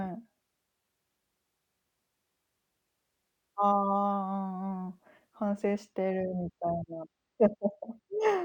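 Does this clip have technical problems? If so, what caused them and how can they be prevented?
Yes. From 5.50 s to the end, channel delay (comb filtering) dulls the speech: one channel lags by roughly two samples, and the mono sum notches near 10 kHz. Align channel timing before summing to mono.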